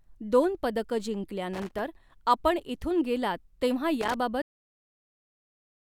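Loose connector crackle appears twice in this speech clip, from 1.53 to 1.79 s, right after "दोन पदकं" and before "आपण इथून", and again from 4.01 to 4.14 s. Each burst is an irregular, scratchy rasp lasting a fraction of a second. It happens when a worn or dirty contact flickers between touching and not touching, chopping the signal on and off, with any DC on the line turning each break into a small pop.

A cut-off end follows at 4.42 s, where the audio stops dead mid-sound and falls straight to digital silence for the rest of the file, with no natural decay. That abrupt halt means the final buffers of the recording were never written or played out, so the tail of the sound simply vanishes.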